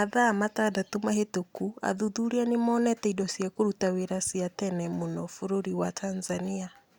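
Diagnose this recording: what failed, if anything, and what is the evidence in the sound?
Nothing failed: no stage from capture to playback leaves an audible trace anywhere in the speech.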